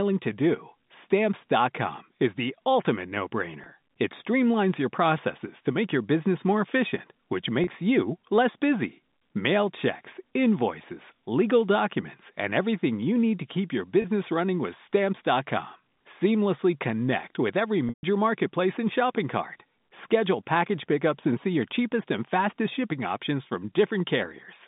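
Packet loss with pitch repetition occurs at 3.64–3.66 s, 7.64–7.67 s and 14.02–14.04 s, gaps of 20, 30 and 20 ms. The receiver loops the last pitch period, so each sounds like a brief buzzy hold. The 17.89–18.03 s loss lasts 140 ms and fades to silence before speech cross-fades back in. On a spectrogram, frozen flat harmonic stripes appear inside the 3.7 kHz telephone band, with a blank patch at 18 s. The waveform shows identical repeating cycles.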